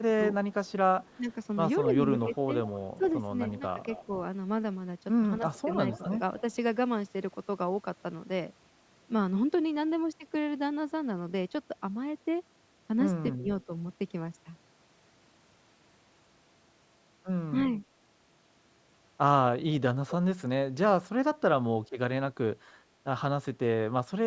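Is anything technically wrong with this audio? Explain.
Yes, the speech shows two related call-audio faults.

Speech suppressed in double talk occurs from 0.18 to 3.01 s, 5.41 to 6.43 s and 13.33 to 13.7 s. Within each span the speech dips for only brief fractions of a second: by about 10 dB in the first two and about 20 dB in the third. The likely cause is an echo canceller that could not separate this talker from loudspeaker echo while both sides spoke, so it attenuated everything.

Echo leak appears as a delayed copy of the speech trailing the original by 252 ms. It runs from 0.53 to 6.41 s at about 20 dB below the speech, with faint scraps at 13.61 to 13.65 s (about 35 dB down) and 17.78 to 17.84 s (about 30 dB down). The likely cause is a far-end loudspeaker whose echo canceller let some pickup return. The fixed delay distinguishes it from room reverberation, which smears continuously instead of repeating as a distinct copy.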